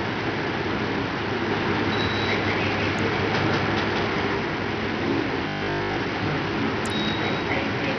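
Throughout this everyday sound recording, the treble flickers and drops away under a gritty, aliased haze, likely from heavy Bluetooth SBC compression at a low bitrate near 64 kbps, unlike smoother perceptual-codec smearing. From 1.51 to 4.35 s a doubled audio track appears: an equally loud, dry copy trails roughly a fifth of a second behind, likely from a second capture path, and it starts and stops abruptly without any echo decay. From 5.48 to 5.98 s the sound turns into a rigid metallic 50 Hz buzz, robotic sound from repeated short buffers likely replaying 20 ms chunks over most of that stretch, distinct from a dropout because the gap is filled with repetitions rather than silence.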